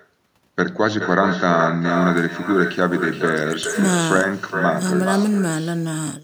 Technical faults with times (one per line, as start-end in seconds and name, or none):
0.00-6.24 echo with no canceller